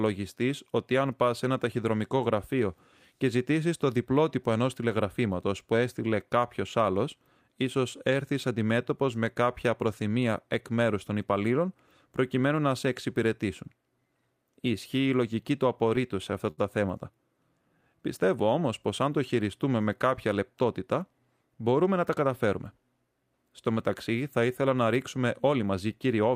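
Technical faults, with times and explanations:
16.51–16.59 s, short stall from a late packet: just after "σε αυτά" the sound holds for about 66 ms while the jitter buffer waits, then resumes with nothing lost, arriving 66 ms later. On a spectrogram the last frame's harmonics run flat and smeared; the waveform shows a repeating, slightly buzzy cycle.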